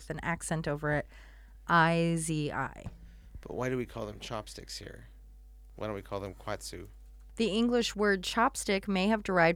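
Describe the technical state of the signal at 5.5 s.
At 5.5 s the speech carries mains hum, present throughout the clip. It sounds like a steady low tone at 50 Hz with some low harmonics, sitting roughly 20 dB under the signal. A ground loop or nearby transformer is coupling the power line into the audio path.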